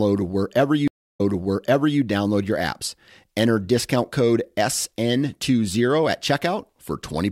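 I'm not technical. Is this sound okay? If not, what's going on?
No. Between about 0.88 and 2.00 seconds there's a stream reconnect: the connection dropped, the player stopped, reconnected, and started decoding again partway through the stream. You hear this as a gap of about 0.29 seconds of silence, after which the speech picks up roughly 0.84 seconds earlier than where it cut off, so a short stretch gets repeated before "download your apps."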